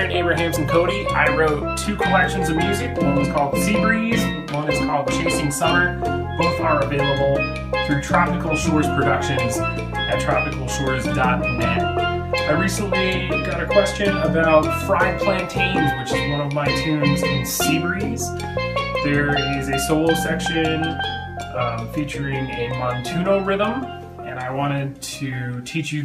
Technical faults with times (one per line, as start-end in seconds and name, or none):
none